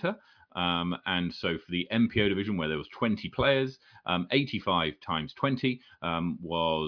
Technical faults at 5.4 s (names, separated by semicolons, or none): none